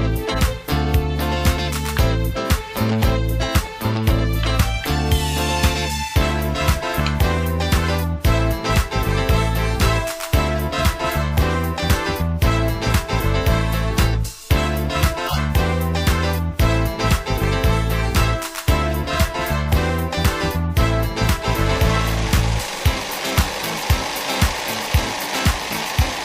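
At 0.32 s a brief blip cuts in and lasts until 0.37 s. It is a corrupt frame decoded: damaged bits in one compressed frame were played as if valid. Misread values push energy into the wrong frequencies, peaking around -20 dBFS. At 15.23 s a longer, louder burst runs to 15.39 s, near -10 dBFS. Its length points to roughly three consecutive frames hit.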